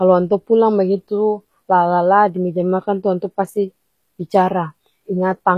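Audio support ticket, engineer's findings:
Treble on the speech sounds synthetic throughout. S sounds come out gritty and lispy, and nothing comes through above about 17.7 kHz. This is likely HE-AAC compression at a low bitrate, somewhere around 24 kbps. Spectral band replication is copying the lower bands upward into the treble, so the harmonics don't line up past the crossover.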